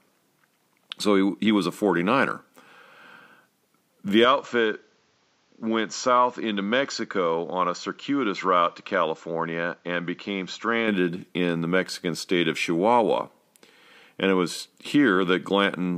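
At 4.25 s, right before "in the", the speech suddenly goes duller and a bit boxier, with nothing above about 7.5 kHz. It also drops around 5 dB and picks up a faint new background noise well under the voice. There's no gap at the changeover, and full brightness returns at 10.88 s. That pattern points to an input switched to a poorer device, likely a different mic or a headset's call profile taking over mid-recording.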